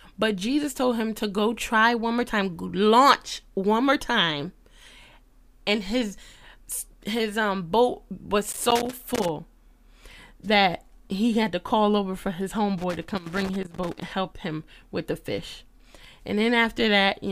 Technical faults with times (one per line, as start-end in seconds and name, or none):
8.51-9.29 loose connector crackle
12.78-14.05 loose connector crackle